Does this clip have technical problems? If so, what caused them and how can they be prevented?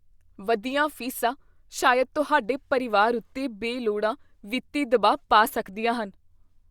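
No, no technical fault can be heard anywhere in this speech clip. With nothing to trace back to a cause, no preventive step is needed here.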